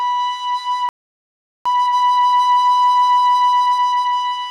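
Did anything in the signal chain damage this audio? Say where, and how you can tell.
Yes. The damage happens at the playback stage. At 0.89 s the music cuts to silence mid-flow and stays silent until 1.66 s, a gap of about 0.77 s. Nothing fades out beforehand, and there is no noise in the gap. This is a playback stall. The likely cause is a player that ran out of buffered data or had its output thread blocked. When it recovers, the music resumes from the point where it stopped.

The player then fixes the delay with a time-compressed catch-up, which runs from 1.66 s to 4.42 s. Over that stretch the music plays about 1.25 times too fast, but the pitch does not change. Tempo rises while pitch stays put, so this is not simple resampling. The player is cutting out short slices and cross-fading across the joins, until normal speed returns at 4.42 s.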